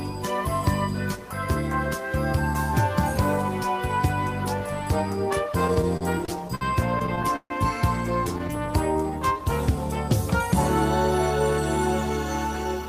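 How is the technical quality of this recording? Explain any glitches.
The recording has two stretches of repeated stalls (stutter) and one jitter buffer slow-down.

Between 5.67 and 6.63 s, and again between 6.99 and 7.52 s, packets arrived late or more slowly than playback consumed them, so the jitter buffer kept running dry. Each time, the receiver extended the last sound until data caught up. The first stretch has 8 such gaps, the longest 59 ms, totalling 176 ms or 18% of that span. The second has 6, the longest 142 ms, totalling 191 ms or 36%. Nothing is lost, but the audio drags and stutters, especially in the second burst.

From 8.51 to 9.77 s, the jitter buffer was low or had raised its target delay, so the receiver padded it by repeating single pitch periods or bits of pauses many times in a row. That adds 118 ms, and the audio plays at about 91% speed with unchanged pitch, so sounds come out drawn out.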